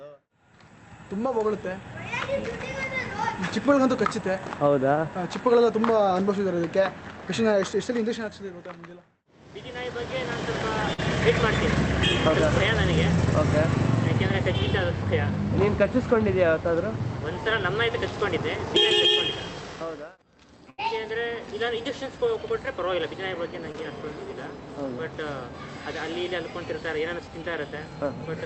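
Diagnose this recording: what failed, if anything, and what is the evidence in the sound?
Burst of packet loss at 10.93 to 11.00 s and again at 20.70 to 20.80 s, a network fault. In each gap the receiver kept extending the last sound and turned it down, heard as a held, fading tone or hiss. The first event fills about 46 ms and drops 40 ms of real audio. The second fills and drops 80 ms, so the sound resumes further on, with that stretch skipped.

Short concealed packet loss at 23.72 to 23.76 s, also in the network path. A brief run of packets arrived too late for the decoder, so the receiver improvised about 19 ms of continuation from the preceding sound, pitched or noise-shaped, before blending back into real audio. Roughly 20 ms of the original is gone, heard as a quick smear or wobble where a short transient may simply be missing.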